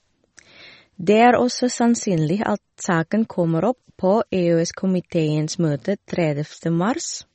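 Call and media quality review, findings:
MP3 compression, likely cause, entire clip: encoder short of bits, which fits a 32 kbps stream. Treble cut off at 8.3 kHz, weak frequency lines zeroed and flickering between frames. Speech dull, watery and swirly, s sounds chirping, attacks smeared; damage plainly audible.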